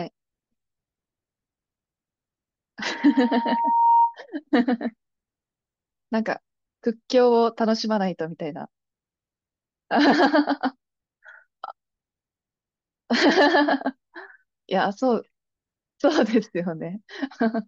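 A speech recording where, from 2.85 to 4.15 s, loudspeaker feedback squeal sets in: the microphone re-amplifies its own speaker, so a 929 Hz tone swells over about a second to roughly 5 dB above the speech.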